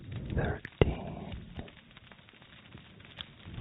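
Nothing is technically wrong with this audio, which carries the narrow, telephone-style band of a call path that stops around 4 kHz.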